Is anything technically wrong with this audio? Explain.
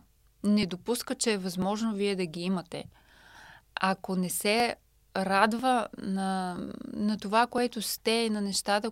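Yes. The recording was likely captured in chunks of about one second, and a few milliseconds of sound went missing at each handover, with the two sides butted together and no silence between them. This audio missing between chunks shows up as brief skips in the speech at 0.63 s (just before "допуска че е"), 1.62 s (just before "вие да ги"), 3.61 s (just before "ако не"), 4.60, 5.59, 6.59 and 7.58 s, a steady once-per-second rhythm of tiny jumps.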